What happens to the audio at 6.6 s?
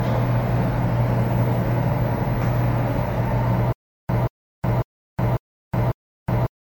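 At 6.6 s the audio is inside a stutter with silent gaps that runs from 3.73 s to the end. A 182 ms burst repeats every 548 ms with about 366 ms of digital silence between, five times in all. This is likely a player or stream stalling, replaying its last fragment on each retry and then running dry, so the intended audio is lost.

Under that, generation loss colours the sound: it is swirly, smeared and hollow, attacks are blurred, and nothing sounds above 19.9 kHz. The likely cause is repeated MP3 re-encoding, around ten passes, which fits a 128 kbit/s chain where each pass requantises on a shifted frame grid and piles up noise and spectral holes.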